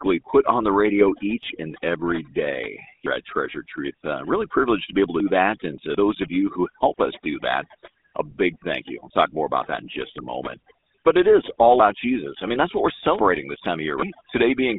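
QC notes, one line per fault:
throughout: overdone noise removal. The noise reduction was pushed too hard, so individual frequency bands sitting near its noise estimate get pulled far down or switched off entirely. The background collapses to near silence flecked with twinkling specks, and the quieter components of the speech are stripped away along with the noise, with soft consonants and decaying syllable tails sounding hollowed out.
throughout: GSM full-rate codec. The sound points to the original 13 kbps GSM full-rate coder, which represents the voice with a vocal tract filter excited by regularly spaced pulses and retains only a third of the excitation samples. That coarse excitation produces a plainly audible buzzy, gravelly roughness on the speech. The audio is confined to a telephone band of roughly 250 Hz to 3.7 kHz, so there is no low body and no air at the top.
12.50–12.57 s: GSM bit errors. 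Just before "that's what we're", a brief burst of corruption hits the decoder, spanning what sounds like three frames. Flipped bits in the filter, pitch or gain parameters distort the spectral shape and level for each affected frame, so for roughly 70 ms the speech breaks into a squawking, gargled burst before the decoder recovers.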